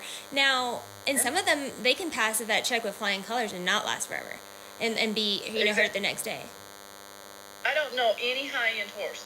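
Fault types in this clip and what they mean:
DECT cordless phone buzz: a thin, steady buzz with a 100 Hz fundamental and many harmonics runs through the whole clip, around 20 dB below the main signal. A nearby DECT handset or base fires a radio burst every 10 ms, which the audio circuitry rectifies into sound.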